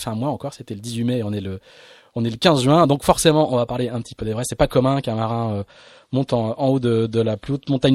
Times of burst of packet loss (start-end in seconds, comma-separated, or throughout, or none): none